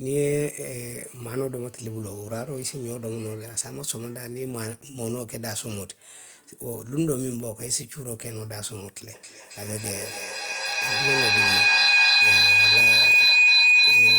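From 0.52 to 3.37 s, a GSM phone buzz sits under the speech. A nearby 2G phone on a call sends radio bursts 217 times a second. The audio circuit rectifies them. The result is a steady, raspy 217 Hz buzz, rich in harmonics, about 30 dB below the speech.

At 9.13 s a feedback howl begins and runs to the end. Two devices share the call in one room, and each loop trip adds gain. The repeats, roughly 0.3 s apart, narrow to a tone around 3 kHz. It peaks about 13 dB above the speech.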